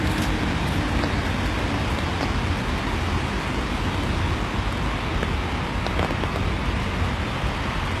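A recording of everyday sounds whose treble is bright but synthetic throughout, likely from HE-AAC compression at a very low bitrate, around 16 kbps. Replicated upper bands turn gritty and metallic and stop at about 12.3 kHz, unlike the dull roll-off of plain low-pass filtering.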